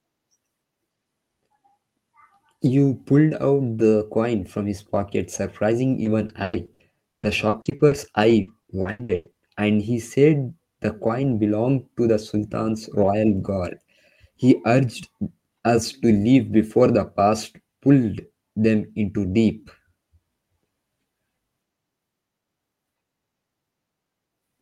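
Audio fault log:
6.03–9.35 s, repeated packet loss (robotic sound): between "from his pocket surprising" and "and he said the", the signal breaks up into some twenty short holes, none longer than 0.1 s. Each is patched by stretching the preceding sound, so about 27% of the span is synthetic fill, with only around 0.4 s roughly rebuilt. Because the repeats follow in quick succession, the speech turns choppy, with fragments missing.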